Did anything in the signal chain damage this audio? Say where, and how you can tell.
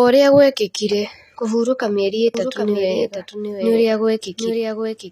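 Yes. At the codec stage, the audio is likely HE-AAC at a low rate, around 24 kbps. Nothing sounds above 14.9 kHz, and the treble is replicated rather than simply cut, unlike a plain low-pass.

From 2.35 s, after "ũrĩa gũekĩkire kũhurũka mĩeri", a doubled audio track runs to the end, about 5 dB quieter and roughly 0.7 s late. It likely comes from a second capture path or an editing slip. Unlike an echo, it starts abruptly and has no decay or room colour.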